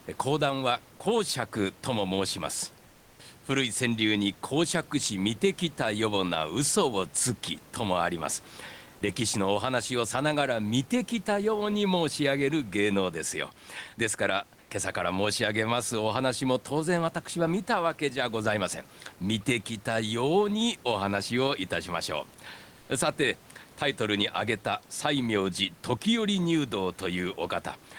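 Discontinuous transmission likely replaced the room background with comfort noise at 2.87–3.19 s and 22.81–22.89 s: flat, featureless hiss, about 6 dB and 1 dB quieter.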